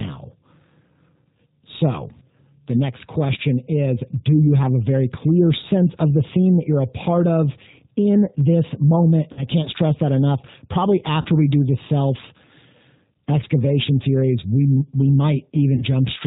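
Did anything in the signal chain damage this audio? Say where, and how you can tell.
Yes, at the codec stage. Throughout the speech, the band stops at 4 kHz and the sound has the slightly rough, synthetic texture of the G.729 codec at 8 kbit/s, and the damage is plainly audible. The encoder doesn't send the waveform. It sends a vocal tract filter, a pitch predictor and a few pulses per frame, so the decoder rebuilds an approximation of the speech rather than the original.

At the network stage, VoIP packet loss concealed by the speech codec shows up three times, each covering about 40 ms of missing audio, which fits two 20 ms packets. The gaps fall at 9.33 to 9.44 s between "of in this moment" and "can't stress that enough", at 11.21 to 11.27 s just before "we do the self", and at 15.76 to 15.83 s. In each one, the decoder extends its last pitch and filter and lowers the gain frame by frame, so the sound is smeared and fading rather than silent. 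Each frame depends on the one before, so the error carries past the point where packets return, which is why each disturbance runs longer than the 40 ms actually lost.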